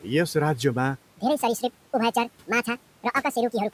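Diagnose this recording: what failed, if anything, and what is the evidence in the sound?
Section at the wrong speed from 1.13 s onward: speech jumps to 1.74 times speed, about ten semitones higher, likely a playback clock mismatch.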